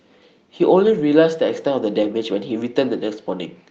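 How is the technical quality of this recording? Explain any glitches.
The speech carries two brief packet-loss repairs heard as rough patches, passed through an Opus call path whose 8 kHz cutoff limits the top end.

Lost packet rebuilt from error correction, 0.85–0.99 s and 2.03–2.05 s: the decoder filled missing packets from lower-bitrate copies in the following packets. No gap is heard, but these stretches sound grainier and noisier. The first repair spans about 80 ms, consistent with four 20 ms packets.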